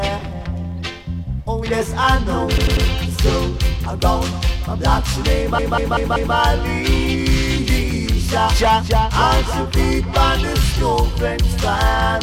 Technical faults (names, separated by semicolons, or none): repeated frames